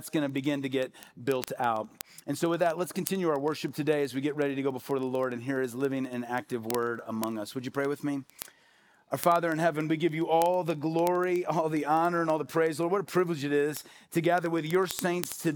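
Sharp ticks of uneven strength run from 0.13 s to 15.52 s, roughly every 40 ms. These are word clock ticks: the receiving device runs on its own clock, about 500 ppm off the sender's, so one sample is dropped or repeated at each slip.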